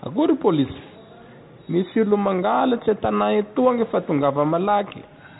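Speech running through a Bluetooth CVSD headset codec for the whole clip: nothing passes above about 3.8 kHz, and the one-bit, 64 kbps-style delta coding audibly fails to track fast changes, leaving scratchy sibilants, distorted loud high content, and a granular hiss underneath.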